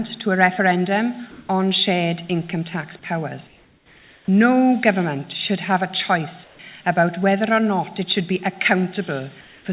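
In the gaps at 1.31–1.49 s, 3.47–4.28 s, 6.44–6.59 s and 9.41–9.65 s, the background becomes a steady, featureless hiss. It is about 2 dB louder in the first gap and about 2 to 4 dB quieter in the others. This is likely comfort noise in place of the background, generated by the receiver while the sender stopped transmitting during the quiet. Across the whole clip nothing is heard above 4 kHz, which fits a narrowband call codec.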